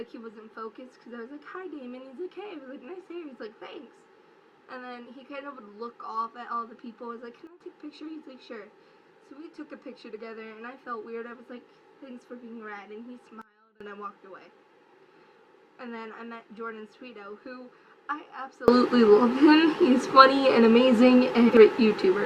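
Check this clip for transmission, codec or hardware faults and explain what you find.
Three sudden gain jumps: at 7.47 to 7.61 s the level drops about 12 dB, at 13.42 to 13.81 s it drops about 24 dB, and from 18.68 s to the end it rises about 24 dB. The likely cause is a gain setting applied instantly without a ramp. Unlike a fade or compressor pumping, the background noise steps with the sound in one sample.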